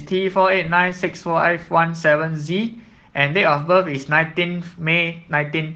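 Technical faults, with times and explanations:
Throughout, Opus voice compression: the damage is plainly audible across the whole speech clip. The sound fits a rate of around 16 kbps in hybrid mode, where SILK models the lower band with linear prediction and a thin CELT layer covers everything above 8 kHz. The excitation is coded coarsely, so the voice comes across hoarse and a bit robotic.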